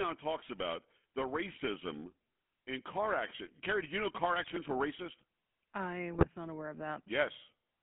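The speech runs through the GSM full-rate codec from start to finish. Band limited to roughly 200 Hz to 3.4 kHz, its sparse, regularly pulsed excitation gives a plainly audible buzzy, gravelly roughness that fits the 13 kbps full-rate coder.

GSM bit errors strike twice: 4.42 to 4.51 s, between "did you know car" and "were racist I", and 6.14 to 6.27 s, before "not aware of". Corrupted filter, pitch and gain parameters produce brief squawks and gargling level jumps, consistent with about five damaged frames each.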